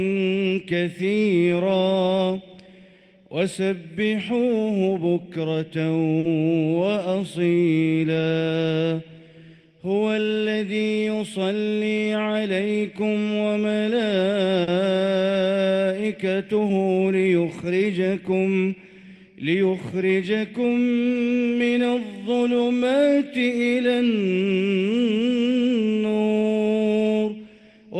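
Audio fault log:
6.19–6.25 s and 14.63–14.69 s: short stall from a late packet, twice. Each time a packet arrived late and about 40 ms of the preceding sound was stretched to fill the gap, then playback resumed where it had stopped, with nothing lost but timing pushed back 40 ms. On a spectrogram, the harmonics run flat and smeared for that span; in the waveform, a repeated, slightly dipping stretch appears.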